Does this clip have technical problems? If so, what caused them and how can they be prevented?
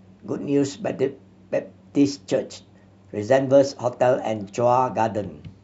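No, there are no technical problems to address here.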